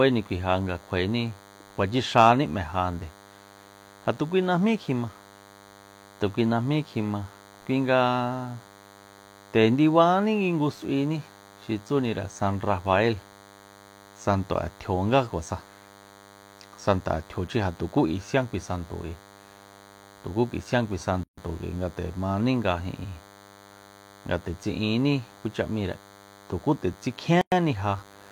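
A DECT cordless phone buzz runs through the whole recording: a thin, steady 100 Hz tone rich in harmonics, sitting roughly 25 dB below the speech. A nearby DECT handset or base fires a radio burst every 10 ms, and the audio circuitry rectifies it into sound.

A gap at a join of encoded pieces opens from 21.24 to 21.38 s, a 140 ms gap, and again from 27.41 to 27.52 s, lasting 106 ms. Separately encoded segments were spliced untrimmed, so encoder start-up delay and final-frame padding leave smeared dropouts before the speech resumes where it stopped.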